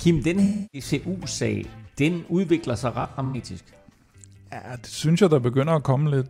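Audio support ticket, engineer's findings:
AAC frame loss with concealment, 0.43 to 0.89 s. Smeared, noisy patch. About 0.3 s of missing audio, which fits roughly seven lost frames. Decoder rebuilt the gap from the last good spectrum.

Same fault, 3.01 to 3.36 s. Intermittent dropouts, about 0.21 s lost in total. Longest run about a tenth of a second. Points to around five scattered frames, each one patched by the concealment.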